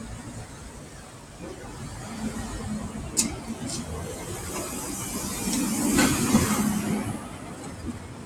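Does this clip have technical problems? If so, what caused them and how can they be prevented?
Yes. A noise suppressor applied to music or sounds is active across the whole clip. The processor was designed for speech, so it treats sustained, steady parts of the audio as background noise and pulls them down, while sharper onsets pass through. The gain therefore swings by around 10 dB, which gives the audio a pumping, uneven quality, with held material thinning as the suppressor clamps down. To prevent it, disable speech-oriented noise suppression when the source is general audio.

There are two clear instances of sound cut by the noise suppressor, from 0.45 to 1.41 s and from 7.24 to 8.26 s. In both stretches the suppressor classified the sound as noise and attenuated it more than the surrounding material, with the deepest drop at about 6 dB. The first span covers roughly a second. Sustained or decaying portions sink in level and their tails are truncated. 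The same fix applies: bypass or reconfigure the suppressor for non-speech content.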